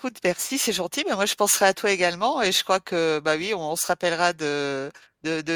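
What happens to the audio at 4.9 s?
At 4.9 s the speech continues intact, with no dropout, click, distortion or other fault at that moment.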